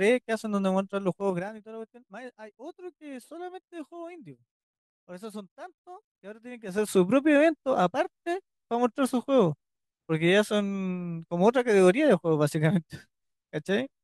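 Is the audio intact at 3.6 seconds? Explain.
Yes, the speech at 3.6 s plays through intact, with no dropout, glitch or damage at that moment.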